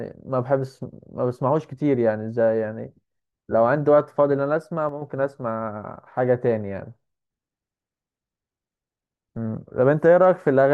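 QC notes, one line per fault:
4.89 to 5.02 s, one channel drops out: for about an eighth of a second the speech suddenly falls by about 6 dB and then comes straight back. It's likely that one side of the stereo pair briefly went silent, so the mono sum lost half its shared signal.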